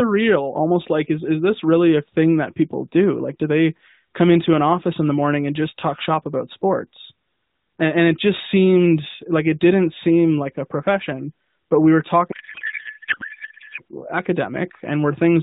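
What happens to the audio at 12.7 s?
A codec payload misread runs from 12.32 to 13.81 s, just after "profession but we were." The AMR frames appear packed octet-aligned but decoded as bandwidth-efficient, shifting every field, so the speech becomes garbled noise and warble that barely tracks it.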